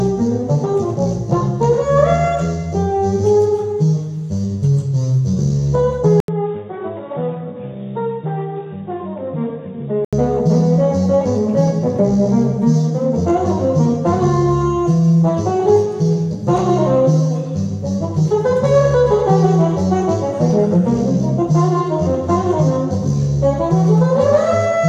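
At 6.20 s the sound drops out for 80 ms, then returns duller and boxier, with everything above 3.8 kHz gone, about 10 dB quieter, and carrying a faint new noise floor. This points to an input switched to a poorer device, likely a second microphone or a headset call profile with a narrower band. On a spectrogram the upper band is cut flat after the brief gap; the waveform shrinks. Full bandwidth and level return at 10.13 s.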